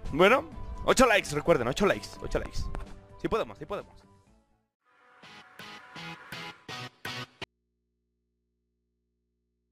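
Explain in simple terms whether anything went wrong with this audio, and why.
The signal feeding this recording was likely lost while the input stayed switched on, an audio dropout to a faint residue. At 7.44 s the sound cuts out abruptly, and through to the end only a very quiet mains hum remains, unlike a natural pause or fade.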